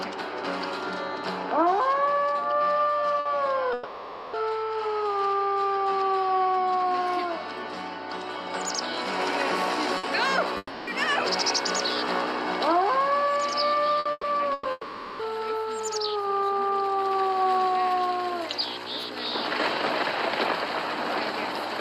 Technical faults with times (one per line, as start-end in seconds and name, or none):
0.00-21.80 mains hum
3.19-3.28 burst of packet loss
3.73-4.36 long network dropout
9.97-10.06 burst of packet loss
10.57-10.90 long network dropout
13.99-14.26 burst of packet loss
14.53-14.68 burst of packet loss
14.71-15.22 long network dropout